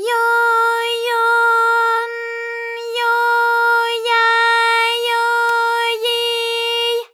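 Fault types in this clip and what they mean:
Electrical switching spike: at 5.49 s a sharp snap lands on top of the sound, lasting only a few milliseconds and peaking at about -10 dBFS. It is most likely a brief arc from a nearby switch, motor or static discharge that the audio line picked up and added to the signal, which is why it shows as an abrupt click with no relation to the underlying audio.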